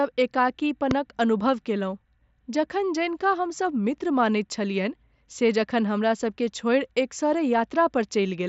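At 0.91 to 0.93 s, a sudden voltage step or pulse, likely from a plug, switch, static discharge or driver glitch, was added to the speech path, and the stages after it shaped that pulse into a brief burst. It is heard as a single loud pop about 15 dB above the speech, a hard transient that sits on top of the talking while the speech itself carries on underneath without a break.

At 7.58 s, a gap of about 7.5 ms in the wideband mSBC Bluetooth headset link, which fits one lost packet, was filled by the receiver with a repeat of the best-matching stretch from the audio just before it. This concealed Bluetooth headset packet loss is so short and isolated that it is almost hidden.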